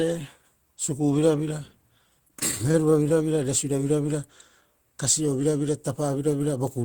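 From 2.19 to 3.12 s the speech suffers repeated stalls, a stutter. Packets arrived too late, so the jitter buffer kept running dry. Ten short gaps, none over 25 ms, were filled by stretching the preceding sound. Nothing is lost, but delivery drags and jerks.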